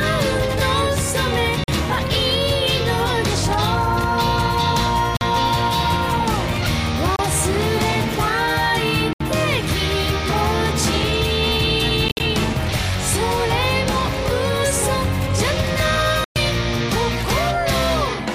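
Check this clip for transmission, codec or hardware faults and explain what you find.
Six short gaps in the sound are the only faults. Each is most likely a Bluetooth dropout: at 1.64–1.68 s, 5.17–5.21 s, 7.16–7.19 s, 9.13–9.21 s, 12.08–12.20 s (broken holes totalling 87 ms, longest 58 ms) and 16.24–16.36 s. Packets missed their deadline, so the output goes silent for 29 to 116 ms. Audio resumes further along, as though it had kept playing.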